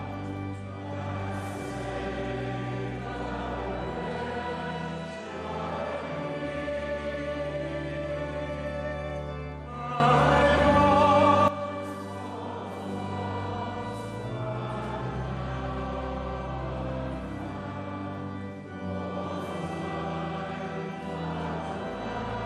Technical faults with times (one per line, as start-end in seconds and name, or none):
10.00-11.48 sudden gain jump